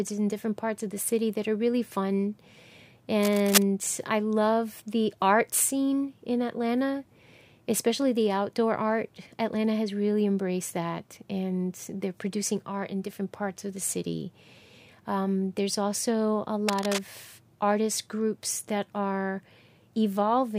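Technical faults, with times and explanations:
3.23–3.63 s and 16.68–16.99 s, cable scratch noise: two short bursts of uneven scratching and rustling sit over the speech. The first, roughly as loud as the voice, ends just before "I love the art". The second, a little quieter, follows "there's also a". The likely cause is a worn cable, connector or control being moved, its contact resistance jumping rapidly and injecting dense, irregular noise.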